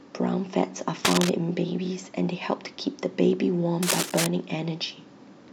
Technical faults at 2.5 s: none

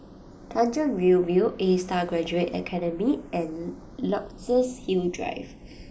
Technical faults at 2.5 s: channels drifting apart

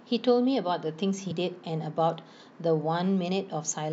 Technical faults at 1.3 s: compressed frames skipped

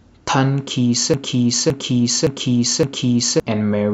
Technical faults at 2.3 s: broken-record loop

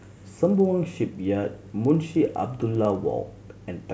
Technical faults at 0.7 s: resampler restarted on every block

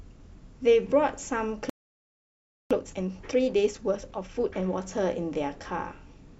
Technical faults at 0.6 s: none

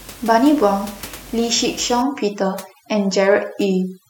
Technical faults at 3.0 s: overdone noise removal

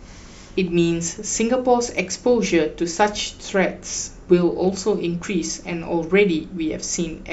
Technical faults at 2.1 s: none

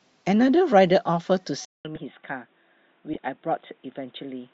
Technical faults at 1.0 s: none

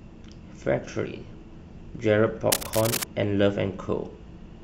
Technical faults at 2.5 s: cable scratch noise

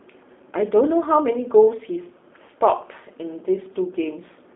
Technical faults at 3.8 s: G.729 codec

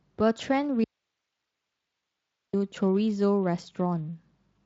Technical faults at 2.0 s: audio dropout to a faint residue

